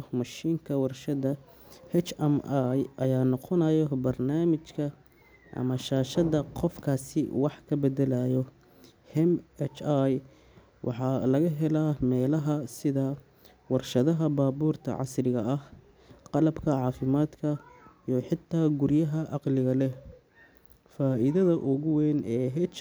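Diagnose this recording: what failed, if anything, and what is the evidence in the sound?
Nothing failed in this recording; the speech carries no evidence of a fault at any stage.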